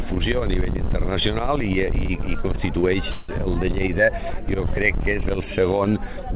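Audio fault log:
3.11–3.32 s, call audio freeze: a fading buzzy continuation fills about 176 ms, then the sound resumes where it stopped, likely from delayed packets draining the jitter buffer.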